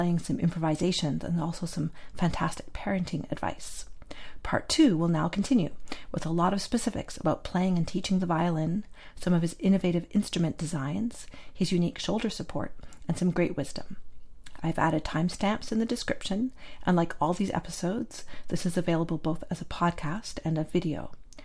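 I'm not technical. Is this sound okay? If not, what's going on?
Yes, it's fine, nothing in it jumps out as a problem, so you can relax about this one.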